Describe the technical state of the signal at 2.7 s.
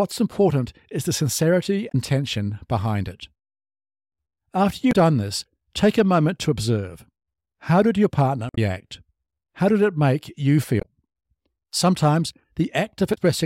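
At 2.7 s the signal is intact, with no audible fault at that moment.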